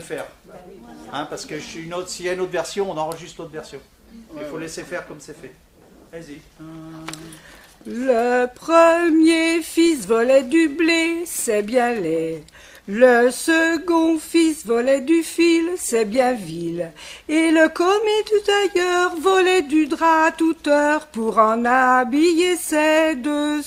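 No technical faults can be heard anywhere in the recording.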